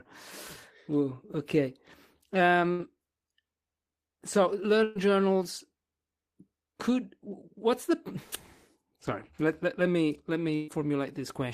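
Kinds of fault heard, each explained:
burst of packet loss: Three runs of speech never arrived to be played, near 2.71, 4.83 and 10.55 s. Each gap, about 80 to 120 ms, is covered by the previous sound held and fading. Speech then jumps ahead, that part missing.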